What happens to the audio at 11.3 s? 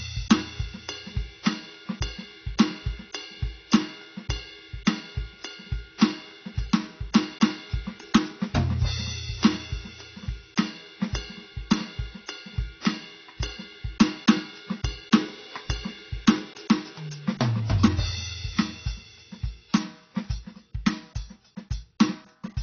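At 11.3 s the music sounds dull and smeared, with a warbling, fizzy texture on sustained tones and nothing above 6.6 kHz, as it does throughout the clip. This is likely AAC compression at a low bitrate, which fits about 24 kbps: the coder drops the top band and starves the rest.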